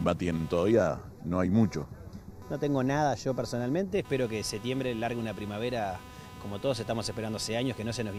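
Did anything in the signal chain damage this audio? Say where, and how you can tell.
Yes. Computer activity noise enters through the analogue wiring throughout: a buzz pulsing roughly 300 times per second, about 20 dB below the sound, showing as stripes unrelated to the sound.

Channel delay (comb filtering), likely at the driver or buffer stage, runs from 0.72 to 3.93 s. A lag of about 0.15 ms, summed to mono, leaves evenly spaced spectrogram notches from roughly 3 kHz.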